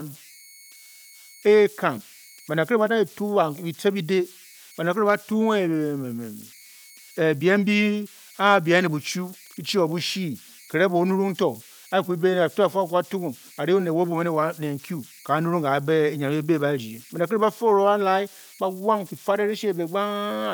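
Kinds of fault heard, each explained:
Converter idle tones: an undithered delta-sigma converter, starved of input during quiet stretches, settles into repeating bit patterns that sound as a whistle, here somewhere around 2 kHz, sitting about 27 dB below the speech and present throughout. Unlike a fixed interference tone or hum, its pitch depends on the input's offset, and under soft speech it breaks up into a grainy hiss rather than holding steady.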